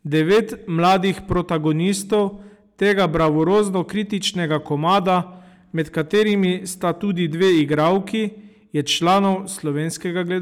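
Speech driven about 9 dB past what one stage could pass produces hard clipping throughout, with a few percent of samples flattened at the ceiling, adding harsh crackle to louder syllables.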